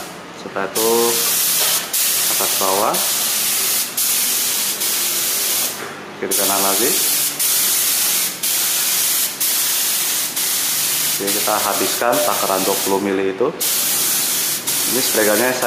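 No technical faults are audible.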